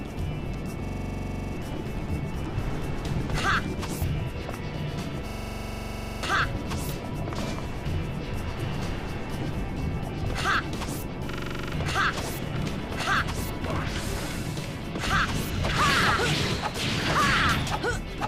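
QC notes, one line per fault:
0.85–1.54 s, 5.29–6.23 s, 11.31–11.73 s, system hang loop: the same 43 ms slice repeats exactly, 16, 22 and 10 times, giving a rattling stutter at 23.4 Hz that fits a 2048-sample ring buffer. Unlike an underrun dropout, there is no silence, and playback then jumps ahead, skipping up to about a second.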